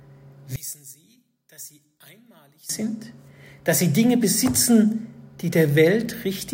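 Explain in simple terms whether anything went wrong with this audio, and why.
One channel inverted, from 0.56 to 2.69 s: the sound suddenly becomes much quieter. Likely, one side of the stereo signal was flipped upside down, so when both sides are combined, everything they share cancels out, leaving only a faint remainder.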